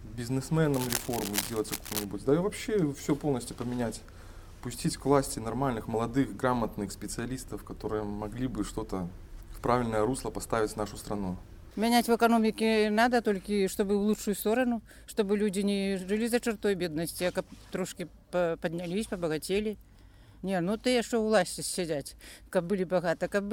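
From about 0.74 s to 2.05 s, a burst of harsh scratching and crackling rides over the sound, dense and uneven, and only a little quieter than the audio itself. This is cable scratch noise. The likely cause is a worn cable, connector or control being moved while recording, so its contact resistance jumps around rapidly and injects ragged noise into the signal for the roughly 1.3 seconds the disturbance lasts.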